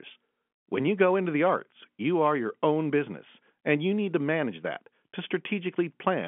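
Nothing in this speech recording stands out as a fault: it carries the narrow character of a 64 kbps G.711 mu-law telephone line, with the audio confined to the 150 Hz to 3.4 kHz line band, nothing above 3.7 kHz, and any trace of the coding at most faint.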